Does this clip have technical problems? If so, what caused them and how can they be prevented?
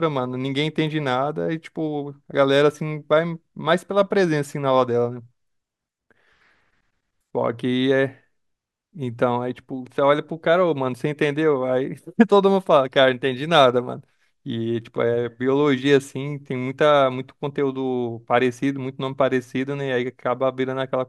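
No, nothing in this speech recording points to a technical problem, so there is no cause to trace and nothing to prevent.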